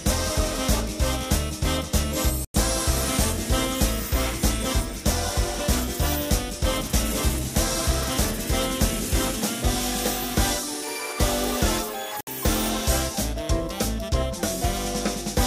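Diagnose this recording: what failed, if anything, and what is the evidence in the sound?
Digital broadcast dropout at the reception and decoding stage: the sound mutes cleanly from 2.45 to 2.55 s and from 12.21 to 12.28 s, fitting about three and two 32 ms frames. Unlike concealed packet loss or an analogue fade, nothing fills the holes, no hiss rises, and the programme resumes with the gap's material missing.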